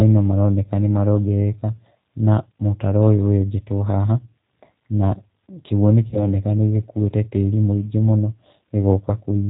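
From the start, the speech carries the sound of the G.729 codec. Nothing above 4 kHz comes through, so the top end is missing. The coder does not send the waveform itself. It sends a vocal tract filter, a pitch predictor and a few pulses for each 10 ms frame, and the decoder rebuilds the sound from those. The damage is plainly audible as a rough, slightly synthetic edge. The narrowband, rough character points to an 8 kbit/s stream.

At 6.10 s there is a VoIP packet loss concealed by the speech codec. The gap in the stream fits a single lost 20 ms packet. The decoder filled it by repeating its last pitch and filter settings at falling gain. That is heard as a short stretched buzzy tone or coloured noise that fades. Each frame depends on the one before, so the speech stays weak and distorted until about 6.19 s.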